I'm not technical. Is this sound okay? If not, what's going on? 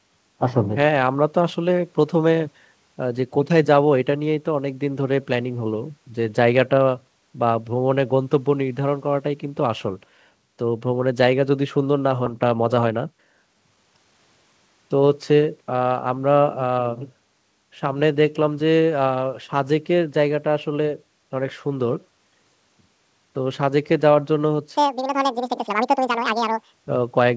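No. At 12.26 s the speech suddenly jumps forward and about a second is missing. This is a skip ahead: the call system dropped a stretch of audio so it could catch up.

From 12.46 to 14.19 s it sounds rushed but not higher-pitched. This is a jitter buffer speed-up: the receiver snipped out tiny slices to cut delay, so it plays about 12% faster.

From 24.77 to 26.74 s it turns squeaky and hurried, almost twice normal speed and nearly an octave higher. This is a section at the wrong speed, likely played back against the wrong clock.

Throughout, the call line carries nothing above 8 kHz.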